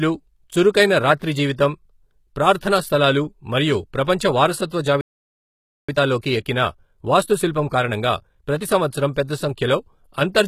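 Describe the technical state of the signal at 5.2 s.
At 5.2 s the speech has simply dropped out: a playback stall runs from 5.01 to 5.89 s, just under 0.9 s of dead silence mid-flow. It's likely the player ran dry of data or got blocked, then picked up again once it recovered.

Underneath that, the whole clip carries plainly audible HE-AAC compression. The treble is likely rebuilt by copying lower bands upward, which fits a low bitrate around 20 kbps, so the s sounds come across gritty and metallic rather than clean.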